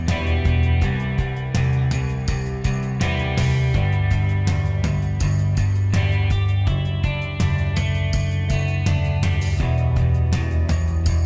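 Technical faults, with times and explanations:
Nothing stood out on listening.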